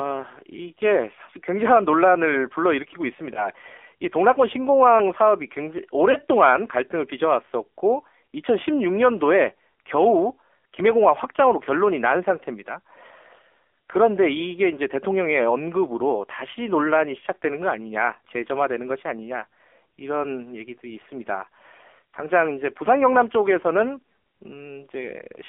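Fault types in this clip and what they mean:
AMR narrowband mobile codec: Throughout the clip the speech sounds thin, buzzy and somewhat synthetic, confined to a band from about 300 Hz to 3.4 kHz with no low body and no air on top. This is the mobile speech codec at work. The signal is sampled at 8 kHz and rebuilt from a vocal-tract model driven by a few pulses per subframe. The plainly audible roughness points to a low-rate mode, which fits about 7.4 kbps.
lost AMR speech frames: The sound briefly dips and warbles twice, from 3.34 to 3.48 s and from 6.12 to 6.16 s, and comes back weak or rough for a moment each time. Each disturbance fits a single 20 ms speech frame that failed its checksum after radio errors. The decoder bridged the gap by reusing the last good pitch and vocal-tract settings at reduced gain, which is what produces the short smeared warble.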